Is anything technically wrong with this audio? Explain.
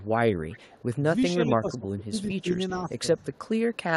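Yes. The speech has two faults.

Echo leak appears at 0.00 to 0.09 s, 0.49 to 0.84 s, 1.71 to 2.40 s and 3.34 to 3.39 s. A faint delayed copy of the voice trails it by about 0.41 s, weakest at the start and end. An echo canceller likely failed to remove the loudspeaker sound that a microphone picked up.

Speech suppressed in double talk occurs at 1.00 to 1.11 s and 1.47 to 2.94 s. The first dip is slight, about 5 dB. The second is deeper, about 20 dB, and affects roughly 0.7 s in total. The echo canceller likely could not separate the talker from the returning echo, so it turned both down.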